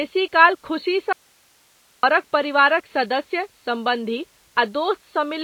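MP3 compression runs throughout: nothing survives above 4.5 kHz, and the speech sounds plainly watery and swirly, likely from a starved low bitrate around 24 kbps. An audio dropout to a faint residue follows from 1.13 to 2.03 s. The speech cuts abruptly for about 0.9 s, leaving only hiss roughly 40 dB down, likely a lost signal on a still-live path, before returning at "परिवारक सदस्य सम्बन्धी".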